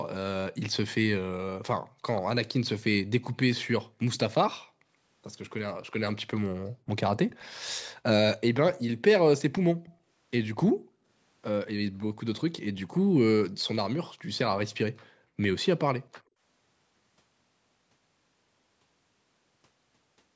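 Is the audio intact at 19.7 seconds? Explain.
Yes, the speech at 19.7 seconds is intact, with nothing there beyond the ordinary high-pass filtering of call microphone processing that trims the lowest bass.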